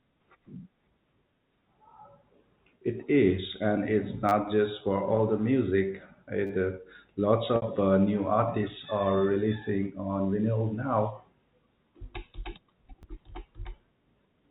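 This is a speech clip carried over G.711 A-law telephone coding at 64 kbps, which limits the sound to below 4 kHz. It has two kinds of fault. The first is a repeated buffer, heard three times. New audio arrived late, so the player replayed the last block. Each block is 10 ms long. After "is and it's" the block plays three extra times, from 4.29 to 4.32 s. The same happens after "for all the music", from 6.47 to 6.50 s. At 13.03 s there is one extra play. The repeats are so short that they sound like a brief buzz or click, not a clear stutter. No speech is lost, so the timing stretches slightly at each one. The second fault is packet loss with pitch repetition, from 7.56 to 7.62 s, just before "uh new artists are". About 60 ms of audio is missing, which fits three 20 ms packets. The receiver filled the gap by repeating the last pitch period. This gives a held, buzzy tone that fades out over about 50 ms. 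The speech then returns with a short cross-fade.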